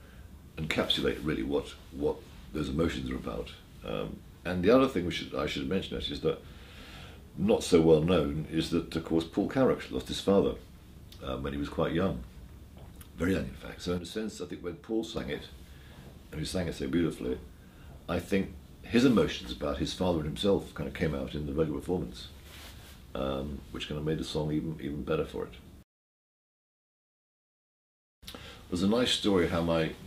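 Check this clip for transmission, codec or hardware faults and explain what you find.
There is one fault, a sudden gain jump. At 13.98 s the level drops abruptly by about 7 dB and stays there until 15.17 s, when it snaps back. The sound and the background noise fall together. The likely cause is a digital gain change applied without a ramp.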